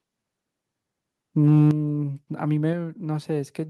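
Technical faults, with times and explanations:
1.44–1.71 s, microphone overload: the loudest stretch gets a harsh, crackly edge. The peaks push about 2 dB past the ceiling, and roughly a tenth of the samples get flattened. That's likely the mic input set too hot, so the converter just chops the waveform tops.
1.71 s, microphone volume stepped down: right as that distorted stretch ends, the speech and the background both drop by about 8 dB in one jump. That's likely the call software reacting to the clipping and cutting the device's input gain in a single step.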